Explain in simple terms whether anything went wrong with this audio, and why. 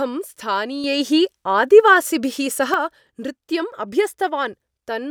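At 0.84 seconds the speech suddenly gets clearly louder, and the background hiss jumps up with it, as if someone turned a volume knob in one instant. At 2.74 seconds it drops back just as abruptly. This is a sudden gain jump. The likely cause is a level setting that was switched instantly inside the digital chain instead of being eased in gradually, so everything in the recording changed volume at once.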